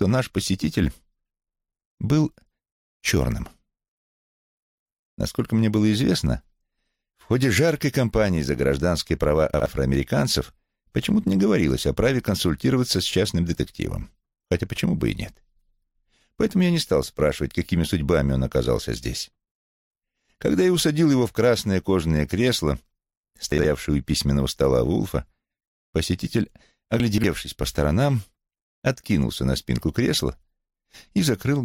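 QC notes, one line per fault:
9.54–9.66 s and 23.52–23.64 s, chunks out of order: in each spot two 60 ms blocks trade places, so one plays after the block that should follow it. Nothing goes missing, but you get a quick jumbled blip with three hard joins.
27.0–27.24 s, chunks out of order: a bigger shuffle here. One 60 ms block turns up three blocks late, so about a quarter second sounds scrambled.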